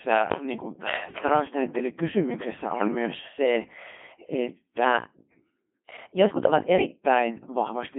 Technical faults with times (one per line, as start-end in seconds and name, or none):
0.00-7.99 Codec 2 vocoder
2.74-2.87 bit errors on digital voice radio
4.84-7.05 section at the wrong speed